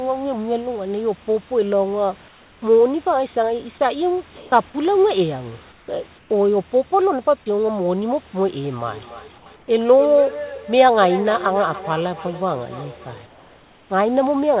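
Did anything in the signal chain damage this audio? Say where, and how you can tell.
Yes. Comfort noise in place of the background appears in gaps at 2.28–2.62, 4.36–4.52, 5.72–5.88, 6.18–6.30, 9.38–9.46, 9.56–9.68 and 13.26–13.90 s. The real room noise gives way to a flat, featureless hiss, level to about 5 dB quieter. Unlike a dropout or gate, the gap never goes silent. This is likely discontinuous transmission in call processing, with the receiver synthesising noise.

A feedback echo between two devices runs from 8.87 to 14.16 s. Each phrase returns at a fixed spacing of roughly a third of a second, thinner and ringier, peaking about 12 dB below the direct sound. Room reverb smears continuously, but these repeats are discrete. A second device's speaker is feeding the other microphone, beyond reach of either echo canceller.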